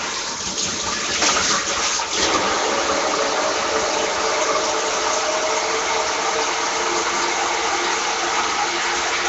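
Everyday sounds run through the whole clip with a plainly audible rough, hissy halo and a smeared, underwater character. Nothing reaches above about 7.8 kHz. This points to Nellymoser compression, likely the Flash-era Asao codec at around 32 kbps, starving weak bands and filling them with noise.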